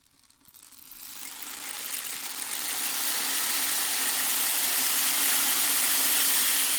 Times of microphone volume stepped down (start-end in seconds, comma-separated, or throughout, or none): none